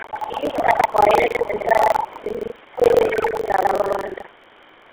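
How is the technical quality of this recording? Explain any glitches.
The technical quality is poor, with codec damage and buffer tearing throughout and echo-canceller faults in the first three and a half seconds.

GSM full-rate codec, throughout: pulse-driven vocal-tract coding, consistent with 13 kbps, leaves the speech buzzy and gravelly, with nothing above 4 kHz.

Buffer tearing, throughout: writer and reader pointers cross each period, consistent with a 2048-sample buffer, splicing in audio about 150 ms old. The result is a rattling 23.4 Hz buzz.

Other side's voice leaking through, 0.00–0.64, 0.82–0.88, 1.32–2.24, 2.43–2.56 and 2.86–3.26 s: a second voice sits about 10 dB to 40 dB below the talker, likely from loudspeaker echo the canceller missed.

Speech suppressed in double talk, 0.16–2.25 and 2.75–3.42 s: while both sides overlap, the talker's voice dips by up to about 15 dB, likely as the canceller turns everything down.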